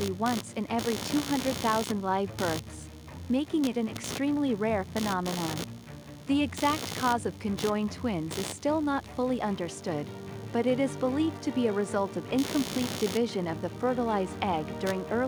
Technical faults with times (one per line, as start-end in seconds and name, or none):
0.00-15.27 computer activity noise